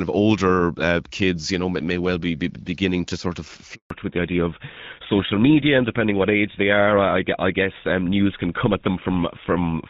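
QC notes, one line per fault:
3.74 to 3.90 s, handover gap: the speech fades out over a few tens of milliseconds and then there's a clean 160 ms hole before anything comes back. That's the call being passed from one network to another, with no speech frames reaching the phone while the switch happened, so whatever was said in that stretch is simply gone rather than garbled. The silence sits right at the seam where the new link picks up.
3.90 s to the end, fallback to narrowband: right after the gap the sound goes duller and rougher, and it stays that way. Before the switch you get light HD Voice, which fits AMR-WB at around 12.65 kbit/s, reasonably clear with a bit of airy top end. After it there's nothing above 4 kHz, which points to the call dropping onto the older GSM full-rate codec, so the sibilance and crispness just vanish.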